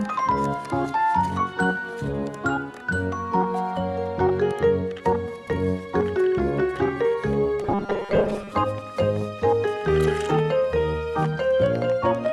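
From 7.62 to 8.52 s the audio turns into a rigid, metallic 200 Hz buzz, robotic sound likely from repeating 5 ms buffers, with roughly half the audio skipped.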